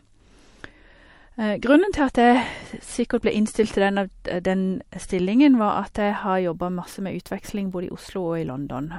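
From 0 to 6.0 s the speech comes from an adaptive stream starting at a low bitrate, sounding dull and swirly, as from a 48 kbit/s MP3. A spectrogram shows a flat ceiling at 11.3 kHz, lifting abruptly at 6.0 s with no waveform gap as quality steps up near 128 kbit/s.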